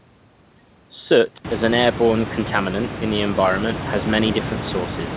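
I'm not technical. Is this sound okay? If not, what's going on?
Yes, nothing stood out as a problem on listening.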